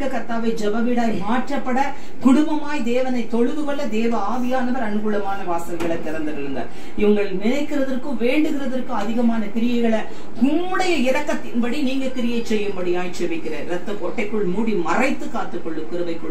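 A DC offset runs through the whole clip: the waveform sits shifted off zero by a constant of about -20 dBFS, eating headroom. Unlike mains hum or rumble, it has no pitch or audible tone, only steady energy at 0 Hz.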